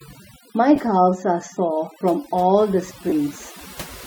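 Speech with overdone noise removal throughout: frequency bands near the noise floor are cut away, leaving near-silent gaps with twinkling specks. Lost LE Audio frames cause two brief smeared dropouts, at 0.76–0.78 s and 3.09–3.12 s, each about 22.5 ms, which fits three 7.5 ms LC3 frames concealed by reused, sign-scrambled spectra.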